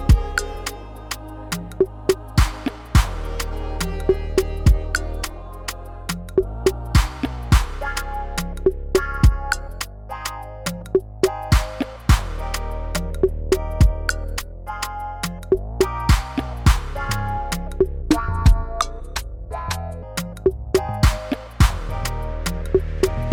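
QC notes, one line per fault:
18.02–20.03 s, section at the wrong speed: that stretch runs at 0.816x, so it drags and sinks about four semitones, likely from being fitted to the wrong clock.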